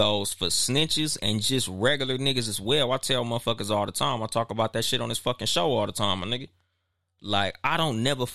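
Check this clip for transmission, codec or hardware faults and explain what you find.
Nothing stood out on listening to this speech recording that would point to a problem with its transmission, encoding or playback hardware.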